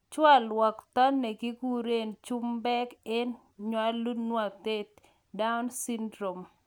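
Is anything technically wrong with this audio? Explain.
No, the speech signal shows no audible technical faults: its level, continuity and frequency content all hold steady throughout.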